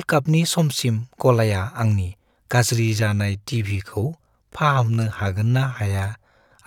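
At 2.72 s the speech abruptly drops to about 0.74 times its former pace and stays there to the end, yet the pitch does not fall with it. That is what marks it as a time-stretched section rather than a slowed playback or tape-speed fault, where the pitch would sink along with the tempo. The stretch was likely done by software repeating short slices of the audio to lengthen it, which leaves the slowed part dragging.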